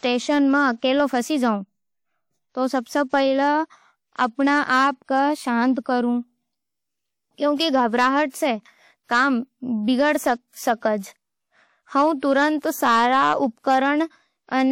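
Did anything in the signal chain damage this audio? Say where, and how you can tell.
Yes. Hard clipping runs through the whole clip: a gain stage or converter was driven about 6 dB past its limit, so roughly one percent of samples had their peaks cut flat. Those flat tops add high harmonics, heard as crackle on the loud parts of the speech.

A transform codec caused pre-echo at 8.29 s, just before "सै काम बिगड़". Its quantisation noise for one block spread 46 ms ahead of a sharp attack, so a brief hiss fills the quiet gap and the onset sounds smeared.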